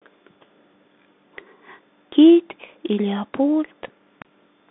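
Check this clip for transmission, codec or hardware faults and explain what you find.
There's one fault, and it runs the whole way through: the speech has been through a Bluetooth CVSD headset codec. Everything sits in a narrow 200 Hz to 3.5 kHz band, with nothing above 3.8 kHz. CVSD sends one up-or-down bit per sample, and its adapting step can't keep pace with loud high sounds, so s sounds come out scratchy over a grainy hiss. That fits a 64 kbit/s headset link.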